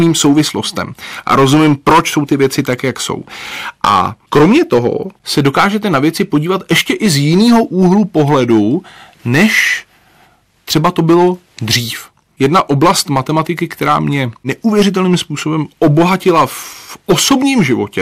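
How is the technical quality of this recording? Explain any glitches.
The recording is marred by hard clipping throughout the speech. The signal was driven about 11 dB beyond what a stage could pass, so a few percent of samples have flattened peaks, adding high harmonics heard as harsh fuzz on louder syllables.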